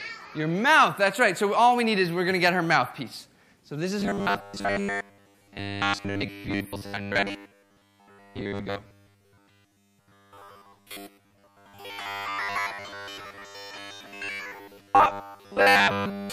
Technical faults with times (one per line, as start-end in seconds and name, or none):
4.00-16.32 robotic sound from repeated short buffers